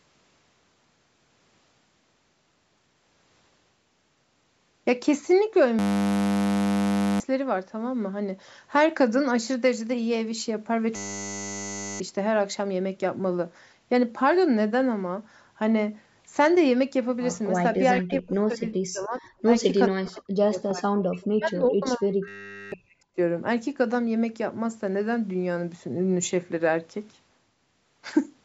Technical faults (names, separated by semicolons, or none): system hang loop; speech suppressed in double talk